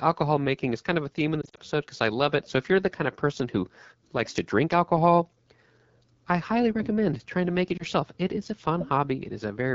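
The whole speech clip carries AMR wideband (HD Voice) codec damage at a plainly audible level. The rough, raspy texture and the grainy, noise-like top band fit the 8.85 kbit/s mode, one of the two lowest rates. At that rate the pulse excitation that drives the vocal tract model is too coarse to reproduce the voice smoothly, and the band from 6.4 to 7 kHz is filled with shaped noise, not the real signal.

From 1.41 to 1.59 s, just after "of a theme in" and before "because I love it", lost AMR speech frames break up the sound. About 100 ms of audio is missing, scattered over 160 ms, with the longest gap 40 ms. That pattern fits about five dropped 20 ms frames. For each gap the decoder repeats its last good pitch and vocal tract settings at falling gain, so the passage warbles and dips in short stutters and returns rough for a moment.

At 7.77 to 7.83 s, right after "trying to make it", a single lost AMR speech frame of 20 ms causes another brief dip and warble. 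Because only one frame is gone, the decoder's concealment covers the gap with a short smeared repeat, not a fade to silence, and the voice recovers almost at once.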